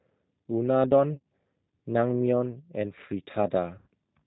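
The whole clip has passed through a G.729 codec. Its bandwidth stops at 4 kHz and its texture fits the 8 kbit/s G.729A variant, which rebuilds speech from a filter, a pitch predictor and sparse pulses. The speech sounds muffled, slightly rough and synthetic.

From 1.13 to 1.24 s, VoIP packet loss concealed by the speech codec sets in. About 100 ms of audio went missing, scattered across 120 ms with the longest gap 40 ms. The decoder filled the gaps by repeating its last pitch and filter at falling gain, so the sound smears into a buzzy tone or coloured noise that fades. A second loss from 3.78 to 3.88 s, about 90 ms long, is concealed the same way. Because each frame leans on the previous one, the sound stays weak and distorted briefly after each gap.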